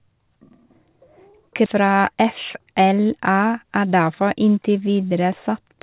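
At 1.66 s the speech lurches forward with no gap at all: a skip ahead, where roughly seven-tenths of a second of audio is simply missing and the sounds on either side of the cut are butted straight together. The jitter buffer had already received later audio, so that stretch was dropped, whether lost in transit or discarded when the buffer overflowed, and the accumulated delay fell by the same amount.

From 2.22 to 2.74 s the speech runs about 5% fast, and from 3.64 to 4.43 s about 7% fast, sounding slightly rushed while the pitch stays put. This is jitter buffer speed-up. The buffer was holding more audio than its target, so the receiver snipped out short pitch-period-sized pieces over and over, removing around 40 ms in the first stretch and around 70 ms in the second to bring the delay back down. Throughout, nothing is heard above 4 kHz, which fits the G.711 mu-law call path at 64 kbps.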